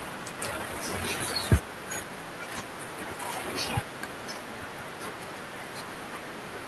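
At 0.39 s there is a skip ahead. Roughly 0.7 seconds of speech never plays. It was lost in transit, or discarded when the jitter buffer overflowed while later audio was already queued. Nothing fills the hole. The speech on either side is butted together almost directly. The listener hears an abrupt jump forward, with part of a syllable or several words simply gone and no silence marking the cut.

From 0.51 s to 2.17 s comes a jitter buffer speed-up. The buffer was holding more audio than its target. To shrink that delay, the receiver cut out tiny pieces, one or a few pitch periods long, again and again. In total around 150 ms was removed. Playback runs at 109 percent speed. The pitch stays the same, so the talker sounds oddly hurried rather than higher. The top end stops near 12 kHz, which fits the Opus call path.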